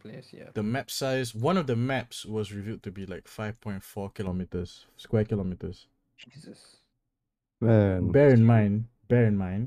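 A speech recording whose top end goes dull from 4.27 s to the end, the mark of de-emphasis applied wrongly: a treble cut intended to reverse pre-emphasis has been applied where none existed or applied twice, pulling 10 kHz down by about 11 dB relative to 1 kHz. Unlike a low-pass filter or band limit, there is no abrupt cut-off. The loss slopes in gradually, so sibilance and air are softened rather than removed.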